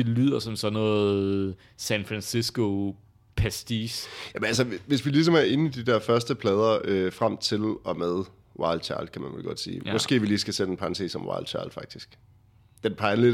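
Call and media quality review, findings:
Block size mismatch (truncated), 3.80–5.12 s in the speech: buzz at about 92 Hz, block tails dropped between pipeline stages, speed ratio 1.0. Spectrogram: harmonic comb at 92 Hz spacing. Waveform: regular discontinuities about every 10.9 ms.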